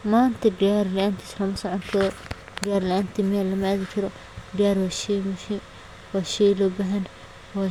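No technical faults occur at any point in the speech, so there is nothing to describe in time order.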